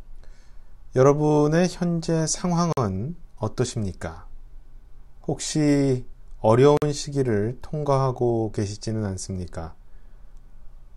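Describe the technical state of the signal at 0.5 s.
At 0.5 s the signal is intact, with no audible fault at that moment.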